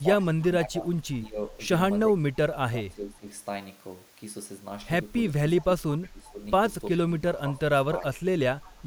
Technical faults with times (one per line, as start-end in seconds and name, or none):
0.00-1.54 speech suppressed in double talk
2.06-3.27 speech suppressed in double talk
5.66-6.43 speech suppressed in double talk
7.08-7.64 speech suppressed in double talk
7.98-8.19 speech suppressed in double talk
8.61-8.81 echo leak